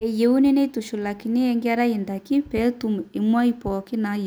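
Nothing stood out on listening to this speech recording.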